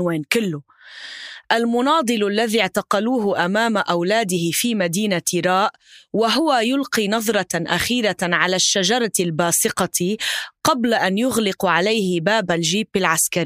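No technical faults can be heard anywhere in this speech recording. Nothing in the signal chain draws attention to itself at any point.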